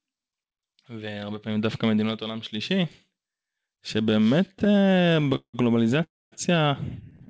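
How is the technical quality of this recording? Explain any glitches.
The speech is marred by two bouts of repeated stalls (stutter) and one call audio freeze. The call path itself cuts off everything above 8 kHz, which fits a G.722 call link at 64 kbps.

From 4.46 to 5.55 s, and again from 7.10 s to the end at 7.30 s, packets arrived late, so the jitter buffer kept running dry. The receiver stretched the last sound across each gap. The first bout has 23 gaps totalling 413 ms, about 38% of the span, with the longest at 179 ms. It drags and stammers audibly. The final bout has 6 brief gaps (60 ms total, longest 12 ms), heard as a stutter.

From 6.03 to 6.34 s, the audio halts for 284 ms, most likely because packets were held up in transit and the buffer emptied completely. A brief continuation of the last sound fades into about 230 ms of silence. The speech then resumes where it stopped, with nothing lost.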